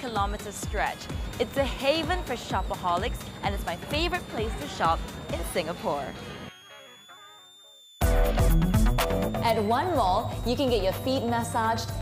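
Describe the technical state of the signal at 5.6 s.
At 5.6 s a switching supply whistle is present, running through the whole clip: a high tone wandering between about 3.2 and 4.1 kHz, roughly 25 dB under the signal, from a power supply cycling audibly. Its drifting pitch sets it apart from fixed-frequency mains hum.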